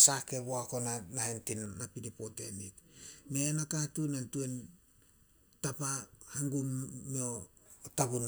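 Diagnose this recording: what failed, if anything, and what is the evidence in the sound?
Channel delay (comb filtering) from 1.66 to 7.66 s: the speech goes hollow and phasey. One channel lags by under a millisecond before the mono sum, notching around 700 Hz upward.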